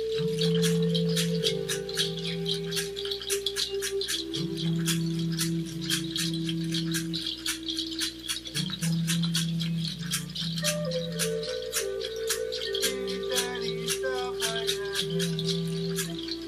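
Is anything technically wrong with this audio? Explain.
Yes. From start to finish a steady buzz at 60 Hz sits under the sound, topped by a rough, gritty hash, and it is fairly prominent, roughly 20 dB below the program. This is video or display buzz: a monitor or video cable is coupling interference into the audio path, and the 60 Hz fundamental matches the picture's field rate, with the sharp edges of each refresh pulse spreading energy upward into that hash.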